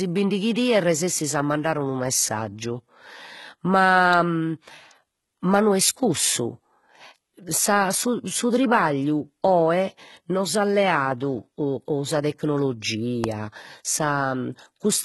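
Throughout the speech, the sound points to HE-AAC compression at a low bitrate, likely around 16 kbps. The treble is rebuilt by copying lower bands upward rather than coded directly, so sibilants turn gritty and metallic, the codec damage is heavy, and nothing remains above 11.8 kHz.

At 4.13 s and again at 13.24 s, a sharp snap or tight cluster of clicks sits on top of the speech. Each is brief, under a few milliseconds, likely an electrical switching spike from a nearby switch, motor or static discharge coupling into the audio line.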